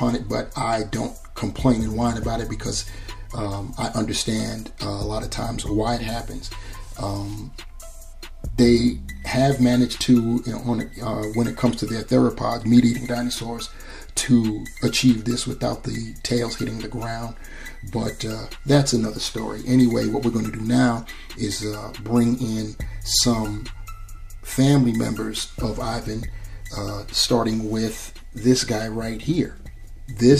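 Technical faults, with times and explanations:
No technical faults can be heard anywhere in this audio. There is nothing to list with a time or an explanation.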